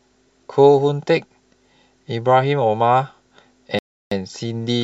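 At 3.79 s the speech drops to dead silence for about 0.33 s, then resumes at 4.11 s, likely a Bluetooth stall where delayed packets left the headphone buffer empty.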